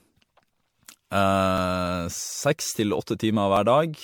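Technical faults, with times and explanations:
Throughout: generation loss. The speech sounds swirly, smeared and hollow, with blurred attacks. This is likely from around seven rounds of lossy re-encoding consistent with MP3 at 96 kbit/s, each pass adding fresh quantisation errors. A spectrogram shows speckled holes, smeared onsets and nothing above 19.8 kHz.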